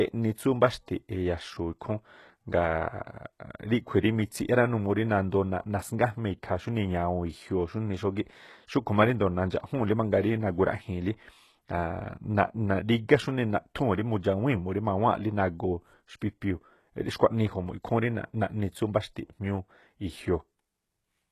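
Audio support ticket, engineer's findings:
Speech, whole clip: gritty, lispy sibilants, treble bright but synthetic, damage plainly audible. Likely HE-AAC compression at a low bitrate, near 16 kbps. Spectral band replication copies lower bands upward, so treble harmonics misalign at the crossover. Spectrogram: repeated, smeared high-band texture; hard ceiling at 12.3 kHz.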